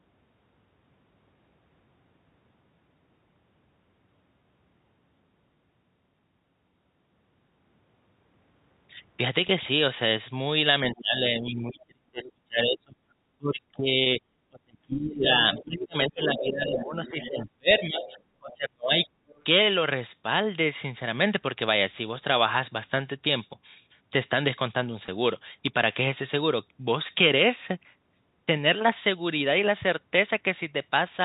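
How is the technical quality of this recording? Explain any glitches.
The recording has three kinds of glitch in a telephone-band speech signal: brief buzzy catches, a long stretch where the talker keeps fading, and a second voice bleeding in. The G.711 narrowband coding itself contributes only the expected 4 kHz ceiling.

Packet loss with pitch repetition occurs at 9.48 s, 14.04–14.06 s and 25.06–25.08 s. Each is a tiny buzzy hold, as if the voice sticks on one sound for an instant. The gaps are about 10 ms at 9.48 s and about 20 ms at the other two, which fits one or two lost 10 ms packets. The receiver filled each hole by replaying the last pitch cycle it had, producing that short, slightly mechanical sustain rather than a click or silence.

Speech suppressed in double talk runs from 10.81 s to 19.07 s. Across roughly seven seconds of that span the talker's voice dips, dulls and drops out in pieces, at its worst by something like 35 dB, nearly vanishing. 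The likely cause is an echo canceller facing both parties speaking at once. Unable to separate the local voice from the loudspeaker echo, it attenuated everything, taking the wanted speech down with the echo.

The other side's voice leaking through appears at 10.94, 12.23, 15.3–15.64, 16.08–16.41, 16.77–17.42, 18.05–18.21 and 19.05–19.43 s. A second voice surfaces under the talker. It is loudest around 15 to 17 s, only about 10 to 15 dB below the main speech, and elsewhere sits around 20 to 30 dB down. This is likely loudspeaker output reaching the microphone that the echo canceller failed to remove fully, which is why it arrives in fragments.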